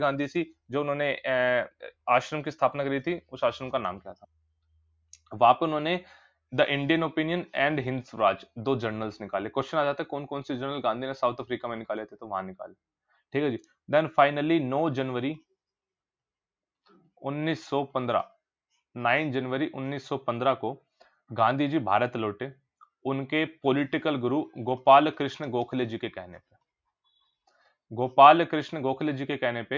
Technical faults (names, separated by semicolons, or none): sound cut by the noise suppressor